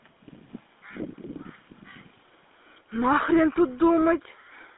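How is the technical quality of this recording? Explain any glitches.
Poor: the speech has been through a GSM full-rate codec from start to finish, and the damage is plainly audible. Throughout, the sound is confined to a phone-line band of about 250 Hz to 3.6 kHz, with a buzzy, gravelly roughness typical of the GSM full-rate codec. The coder rebuilds the voice from a vocal-tract model excited by a decimated pulse train, which fits a 13 kbps full-rate stream. On a spectrogram, energy stops sharply near 3.6 kHz and thins below 250 Hz, with smeared, grainy harmonics.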